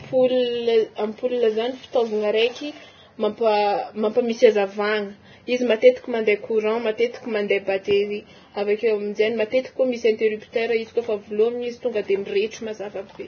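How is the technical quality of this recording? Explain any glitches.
The recording suffers from heavy lossy compression from start to finish. The cause is likely Vorbis compression at a very low setting, which fits a bitrate near 17 kbps. It removes everything above 6.6 kHz and quantises the remaining treble so coarsely that fine detail becomes noise of similar energy. Throughout the speech, this sounds hissy and grainy, with roughened tones and smeared consonant attacks.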